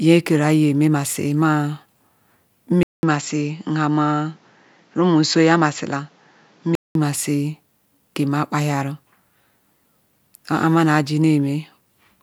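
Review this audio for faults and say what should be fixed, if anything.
From 2.83 s to 6.95 s the speech turns duller and boxy, with nothing above 7.6 kHz, a new noise floor about 35 dB down, and a 200 ms gap at the switch, while loudness stays about the same. This is likely an input switched to a poorer device. Locking the recording input to one fixed microphone, with automatic device switching disabled, would prevent it.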